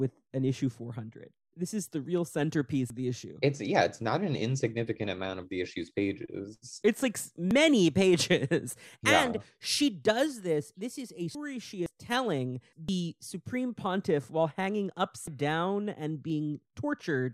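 Small jumps in the speech land at 2.90 s (just before "the issue"), 7.51, 11.35, 11.86, 12.89 (just before "supreme pontiff while hanging"), 15.28 (right after that phrase) and 16.30 s. These are likely dropped buffers from an overrun: a chunk of audio, around a tenth of a second, closer to a third at 11.35 s and about 0.15 s at 15.28 s, is missing, and the two sides are butted together. Unlike an underrun dropout, no gap of silence is heard.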